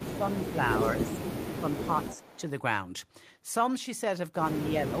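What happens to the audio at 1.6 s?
From 1.55 to 2.38 s the speech dips and breaks up in pieces, dropping by around 10 dB at its deepest for roughly 0.4 s in total. This is speech suppressed in double talk. The likely cause is an echo canceller that couldn't separate the talker from loudspeaker echo while both sides spoke, so it turned everything down. Unlike a network dropout, the level ducks in uneven fragments rather than going cleanly silent.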